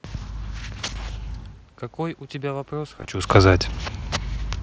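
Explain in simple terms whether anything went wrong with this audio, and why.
From about 1.95 s to 3.69 s, the voice and the room noise behind it slowly swell louder together. This is automatic gain rising. Just before it, around 1.5 s, the talker seems to move away from the microphone, so the sound arriving there drops a lot. The call's level control treats that as input that is too quiet and turns itself up bit by bit over nearly two seconds. That is why the background rises along with the voice.

Between about 2.99 s and 3.05 s there is a brief, nearly hidden disturbance. This is concealed Bluetooth headset packet loss. A few short pieces of audio, about 30 ms in total spread across roughly 60 ms, never made it from the headset to the phone. Each gap is very short, none longer than about 7.5 ms, which fits a handful of lost packets. The phone filled each gap by repeating a closely matching bit of the sound just before it, so the damage is largely hidden.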